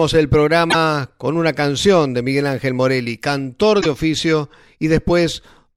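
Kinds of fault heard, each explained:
Damaged data in a compressed stream: a stretch of the encoded file got corrupted, so the decoder chokes on those frames, loses its place and hunts for the next valid header before playback settles again. You hear it twice in this speech, as short garbled blips of roughly 80 ms each, one from 0.67 to 0.75 s just before "con una canción de", and another from 3.78 to 3.86 s.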